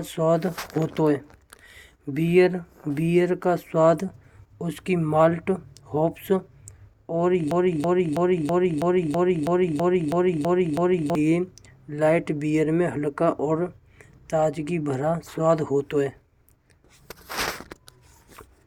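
From 7.51 to 11.15 s, a broken-record loop repeats a 326 ms fragment eleven times, likely from a stalled stream. Unlike an echo, identical copies replace speech.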